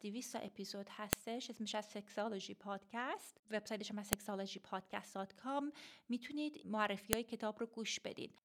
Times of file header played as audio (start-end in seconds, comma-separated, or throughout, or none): 1.13, 4.13, 7.13